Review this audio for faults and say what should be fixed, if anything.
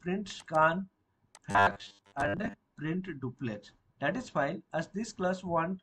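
From 1.51 s to 2.55 s the sound turns into a rigid, metallic buzz at 100 Hz: robotic sound from repeated short buffers. The likely cause is audio arriving too seldom, so the same 10 ms block is replayed to fill the gaps while about half of the real material is skipped. A waveform shows identical 10 ms cycles, and a spectrogram shows evenly spaced horizontal harmonics at 100 Hz intervals. Larger jitter buffers and steady upstream delivery would prevent this.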